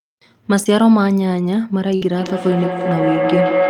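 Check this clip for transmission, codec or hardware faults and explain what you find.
Three faults stand out in this speech clip: two gaps from lost packets that the receiver papered over, and a feedback howl that takes over the final stretch.

Between 0.63 and 0.67 s there is a short concealed packet loss. About 20 ms of audio never arrived, and the decoder filled the hole by extending the preceding sound for roughly 19 ms before easing back into the real signal. It comes across as a small smear or wobble in the speech. On a spectrogram the content runs unnaturally steady across that sliver; in the waveform extended material sits where the natural variation should be.

From 1.95 to 2.03 s a burst of packet loss removes about 60 ms, with roughly 58 ms synthesised to cover it. The receiver carried the last sound forward while turning it down, so the speech briefly turns into a fading held buzz or hiss before resuming further along, with that piece missing. 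A spectrogram shows frozen, dimming bands bridging the gap; the waveform envelope decays smoothly instead of following syllables.

From 2.15 s to the end of the clip a feedback howl builds. A microphone is picking up a loudspeaker on the same call, and each pass round that loop adds level at the frequencies the loop favours, here around 500 Hz. The repeats grow instead of dying away, pulsing roughly every 150 ms, the loop's round-trip delay, and peaking at about 1 dB above the speech. It appears as one bright, thickening horizontal line on a spectrogram, with a swelling, rhythmically throbbing waveform envelope.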